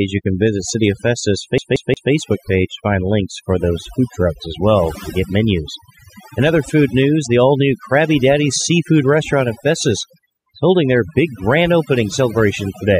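Overdone noise removal runs through the whole speech clip: bands near the noise estimate are cut away, leaving near-silent gaps with twinkling specks. From 1.58 to 2.12 s the CD is stuck on one turn, replaying the same 0.18 s segment three times, with a brief mute at each jump, heard as an even stutter.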